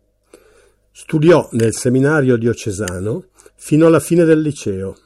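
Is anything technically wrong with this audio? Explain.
Yes. Hard clipping affects this speech in two places, from 1.27 to 1.36 s and from 3.83 to 4.34 s. It is overdriven by about 5 dB and about 3 dB, so peaks hit the ceiling and are cut flat. That produces crackly distortion, flat-topped waveform peaks, and harmonic smearing up the spectrogram.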